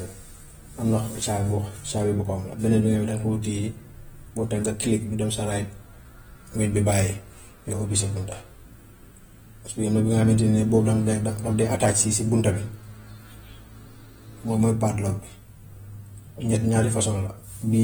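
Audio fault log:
Throughout, AAC compression: the speech sounds smeared, with a warbling, fizzy texture on sibilants. This is likely AAC-LC at a rate near 45 kbps, too coarse for the quantisation to hide itself, with nothing above about 21 kHz.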